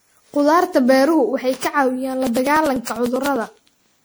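A speech recording that was likely decoded and re-encoded with a lossy codec about ten times, consistent with a 96 kbit/s MP3 chain, shows generation loss. Each pass requantised on a shifted frame grid, so the sound is swirly, smeared and hollow, with blurred attacks. Periodic USB or driver dropouts begin right after "waxay ka caawiyaan la", from 2.27 s to 3.95 s. A blocked bus or driver skips roughly a millisecond of audio about every 0.1 s, leaving around twenty evenly spaced ticks across that stretch.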